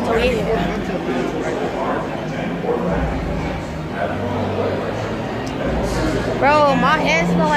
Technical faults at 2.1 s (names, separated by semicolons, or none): mains buzz